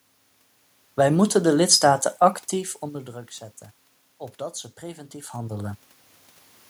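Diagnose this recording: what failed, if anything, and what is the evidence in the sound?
Automatic gain rising, in call processing, from 4.79 to 5.87 s. When the input falls about 17 dB as the talker moves back near 5 s, the gain control lifts it about 4 dB over a second. The waveform envelope and the spectrogram's room-noise floor climb together.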